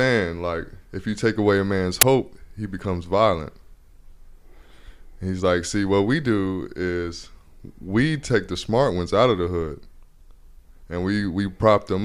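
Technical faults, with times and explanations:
2.01 s, uninitialised buffer: a single block, about 12 ms long, which fits a 512-sample buffer, was sent to the output before any speech had been written into it, so whatever stale memory sat there was played as if it were audio. The result is a loud crack. On the waveform it shows as a short block of abrupt values unrelated to the speech, and on a spectrogram as a thin vertical bar of broadband energy.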